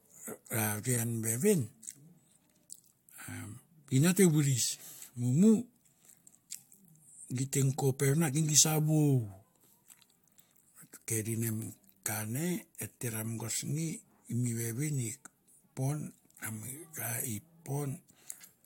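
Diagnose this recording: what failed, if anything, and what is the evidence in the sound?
Nothing failed: listening across the speech turns up no dropouts, clicks, distortion, level jumps or other audible defects at any stage of the chain.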